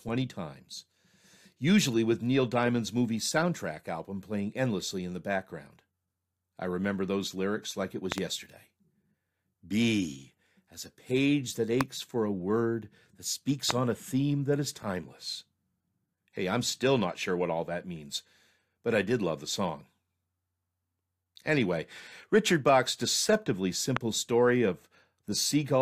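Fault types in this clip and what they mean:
Loud pop: a sudden electrical pulse lands on top of the speech, which carries on beneath it. Four sharp pops stand well above the speech, one a quick double after "those lyrics like it". They likely come from a switch, plug or static discharge.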